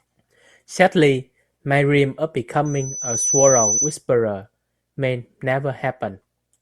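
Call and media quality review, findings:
Loudspeaker feedback squeal, 2.65 to 4.0 s: a steady 6 kHz tone swells over roughly three-quarters of a second and sits about 5 dB above the speech. The mic is hearing its own loudspeaker, and loop gain tops unity at 6 kHz.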